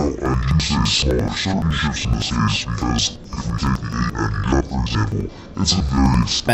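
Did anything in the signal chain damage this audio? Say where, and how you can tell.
Yes. Throughout, the sound is an octave low, doubled and choppy, with a flutter at 11.7 Hz. That fits interleaved audio read as planar at the sample-format conversion stage, in 85.33 ms blocks. Unlike a plain slowdown, the overall pace stays correct.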